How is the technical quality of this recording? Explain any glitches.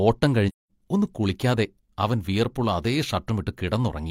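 The recording has one clear glitch: a short dropout early in the speech.

AAC frame loss with muting occurs from 0.48 to 0.71 s. About 213 ms of audio vanishes, which fits roughly five lost AAC frames. The decoder replaced their spectrum with zeros, and the overlapping transform windows taper the sound down into silence and back up again. It is heard as a soft-edged gap. A waveform shows the envelope fading to a flat line and recovering, and a spectrogram shows a blank vertical band across all frequencies with slightly blurred edges.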